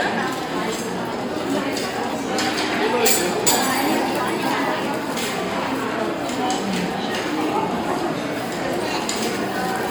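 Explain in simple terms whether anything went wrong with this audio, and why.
Generation loss, throughout the clip: the sounds come across swirly, smeared and hollow, with sharp onsets blurred. This is likely from the audio being squeezed into MP3 and unpacked again about four times, each round adding fresh damage on top of the last.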